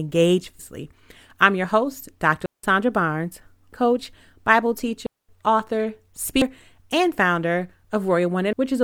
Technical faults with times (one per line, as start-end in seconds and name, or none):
0.59 damaged data in a compressed stream
2.46-2.64 digital wireless dropout
3.73 damaged data in a compressed stream
5.06-5.29 digital wireless dropout
6.41 damaged data in a compressed stream
8.53 damaged data in a compressed stream